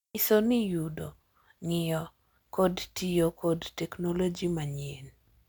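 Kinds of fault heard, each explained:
No technical faults can be heard in this recording.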